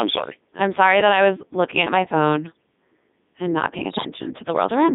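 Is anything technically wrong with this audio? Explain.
Yes. There are two faults.

Throughout, the speech has passed through the Codec 2 vocoder at about 3.2 kbit/s. Only pitch, voicing, energy and spectral shape survive. The decoder rebuilds the voice from sine waves. The result is heavily robotic and buzzy, confined to roughly 200 Hz to 3.7 kHz.

From 3.90 to 4.09 s, just after "and not paying", there are bit errors on digital voice radio. Corrupted bits, around 7 percent, scramble whole vocoder frames. Pitch, level and tone colour jump abruptly. The sound breaks into warbling, bleepy gibberish.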